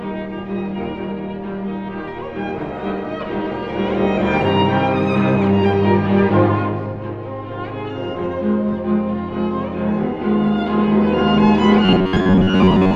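From 11.85 s to the end at 12.95 s, the sound turns into a rigid, metallic buzz pinned at 93.8 Hz, only loosely tracking the original. This is robotic sound from repeated short buffers, likely caused by late-arriving audio, so a roughly 10.7 ms slice is looped over most of that stretch.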